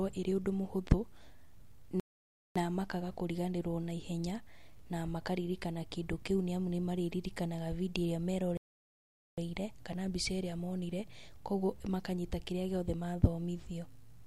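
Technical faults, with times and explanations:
2.00–2.56 s and 8.57–9.38 s, rebuffering stall: the speech stops dead for about 0.56 s, then 0.81 s. Playback ran short of downloaded audio and waited for more before resuming exactly where it left off, with "makaga kũriganĩrwo naihenya na" after the first gap. Both gaps appear as flat waveform and blank spectrogram columns. Nothing is lost, but time is added.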